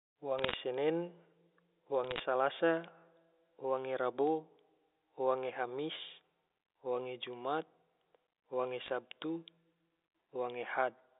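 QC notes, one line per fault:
0.38–0.54 s, 2.04–2.20 s, 8.86–8.90 s: bit errors on a digital phone line. Short bursts of crackle and sharp ticks sit over the speech. Flipped bits at an error rate of a few tenths of a percent corrupt single G.711 samples, and sign or high-bit hits jump as clicks.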